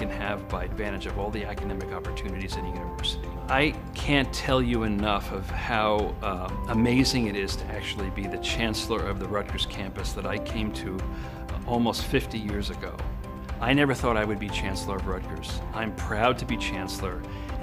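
Right near the start, at about 0.71 to 0.73 s, there's a skip ahead: playback jumps forward with no fill, so roughly 0.4 s of audio simply never plays. It sounds like the buffer overflowed or the stretch was lost in transit while later audio was already queued, and the two sides of the cut are butted straight together. You hear an abrupt join rather than a silence.

Right after that, from about 0.97 to 2.91 s, comes a jitter buffer speed-up. The buffer was holding more than it wanted, so the receiver trimmed lots of tiny pitch-period-sized slices, adding up to about a tenth of a second, to pull the delay back down. The sound runs at around 106% speed with the pitch unchanged, giving that stretch a rushed, hurried feel.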